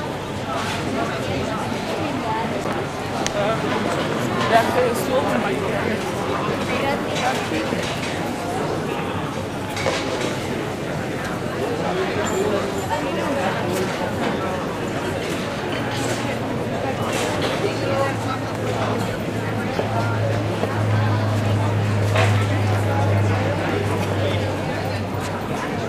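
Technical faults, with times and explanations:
2.64 s, CD skip. A tiny click marks the moment, and the sound breaks off for only a few milliseconds before carrying on from a different spot. A knock or a flaw on the disc threw the laser off its track and onto another turn of the spiral. The player muted briefly while it relocked, then resumed reading from the new turn. That is why the sound does not continue smoothly but jumps abruptly.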